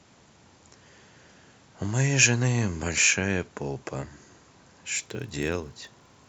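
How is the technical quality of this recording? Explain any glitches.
The recording has one clear technical fault, confined to its final stretch.

A block size mismatch (padded) runs from 4.94 s to the end at 6.28 s. One stage hands over blocks slightly shorter than the next stage reads, and the shortfall in each block is filled with zeros. Each of these tiny silent gaps repeats at 43.1 Hz, which fits 1024-sample reads, so the speech carries a low buzz. Because the gaps are so small, the speech runs only 0.999 times its normal speed, at about its normal pitch.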